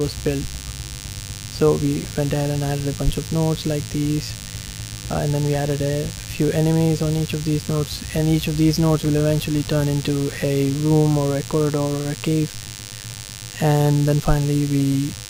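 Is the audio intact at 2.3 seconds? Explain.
No. At 2.3 seconds, as throughout the whole clip, there is DECT cordless phone buzz. A nearby DECT handset or base is transmitting a short radio burst every 10 ms, and the audio circuitry rectifies those bursts into the signal path. That puts a thin, steady buzz at 100 Hz, rich in harmonics, underneath the wanted audio, sitting roughly 15 dB below it, at that moment and everywhere else.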